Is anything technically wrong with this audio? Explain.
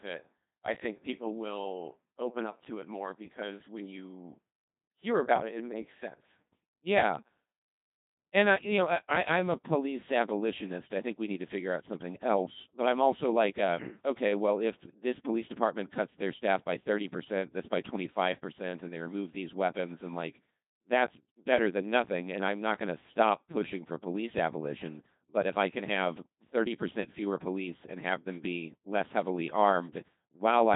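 Yes. The speech runs through a Codec 2 vocoder for the whole clip. Only pitch, voicing, energy and a spectral envelope survive, and the decoder rebuilds everything from sine waves. The result is heavily robotic and buzzy, with nothing above 3.8 kHz, which fits a rate around 2.4 kbit/s. Unlike plain band-limiting or a waveform codec, the original waveform itself is gone, not merely muffled.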